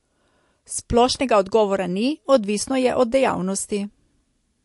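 From start to finish the speech carries plainly audible codec damage, most likely MP3 compression. Nothing gets through above 11.3 kHz, so the top end is sheared off. Short on bits, the encoder has dropped weaker frequency lines that blink in and out frame to frame, giving that watery, swirly texture, metallic chirps on s sounds and smeared attacks. The amount of damage fits a rate of around 50 kbps.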